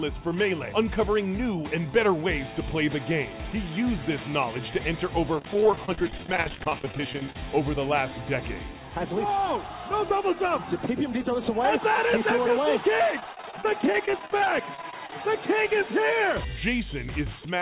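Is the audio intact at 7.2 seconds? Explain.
No. At 7.2 s the audio is hit by repeated packet loss, the robotic-sounding kind, running from 5.37 to 7.43 s. Dozens of short holes, none longer than about 25 ms, are patched by stretching the last sound. Nearly a third of that stretch is concealed, so it sounds choppy.

A jitter buffer speed-up overlaps it, from 7.04 to 7.74 s. The receiver trimmed tiny pitch-period slices, a few tens of milliseconds in all, to shrink the backlog. The sound plays about 5% fast at the same pitch and feels slightly hurried.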